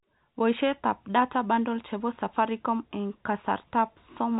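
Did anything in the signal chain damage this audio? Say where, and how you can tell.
No, nothing in the signal chain damaged this audio.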